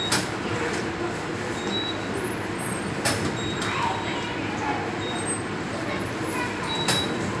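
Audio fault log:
Listening closely to these sounds, nothing stood out as wrong at any point.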